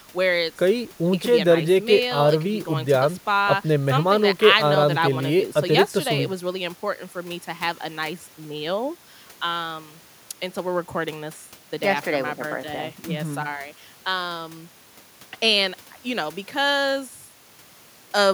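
No technical faults can be heard anywhere in the recording.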